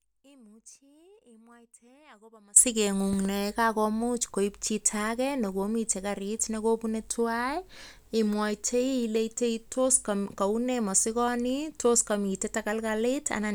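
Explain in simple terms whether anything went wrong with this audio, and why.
From the start until 2.56 s there is an audio dropout to a faint residue: only a faint sound remains, likely because the signal was lost while the line stayed live.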